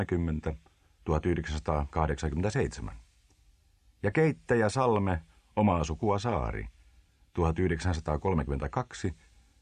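No technical faults detected anywhere in the audio.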